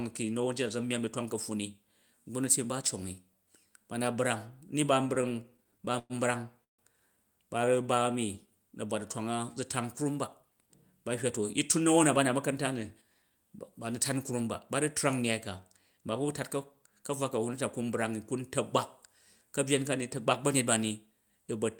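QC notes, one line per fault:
4.87–6.13 s, repeated stalls (stutter): after "ba na brang ni" the speech drags and catches 16 times, longest hold 109 ms; late packets kept emptying the jitter buffer, so 262 ms of sound was stretched.
6.64–6.82 s, call audio freeze: a 147 ms hole opens, almost all of it silent, then speech resumes where it stopped; packets were likely held up and the buffer ran dry.
7.58–8.52 s, jitter buffer slow-down: speech runs at 90% speed with unchanged pitch and drawn-out sounds; the receiver repeated pitch periods, adding 97 ms to rebuild its reserve.
10.42–11.40 s and 11.80–13.31 s, jitter buffer speed-up: from "zu tan krum ba" through "yi tun" to "ba nu̱ tan krum", speech sounds hurried at 106% speed, same pitch; the receiver trimmed short pitch-period pieces, about 70 ms then about 100 ms, to cut excess delay.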